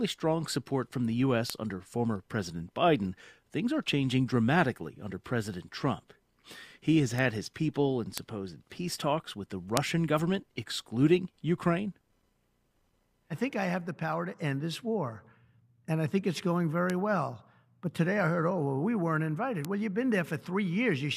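At 1.50, 7.19, 8.18, 9.77, 16.90 and 19.65 s there is a bit error spike: a flipped bit in memory or on a digital link throws the sample value off by a power of two before it snaps back. Each is a lone sharp tick unrelated to the sound, peaking at about −4 dBFS at 1.50, 8.18 and 9.77 s, about −16 dBFS at 7.19 and 16.90 s, and about −10 dBFS at 19.65 s. The waveform shows a one-sample needle, or at 9.77 and 16.90 s one about three samples wide. The spectrogram shows a thin full-height vertical line.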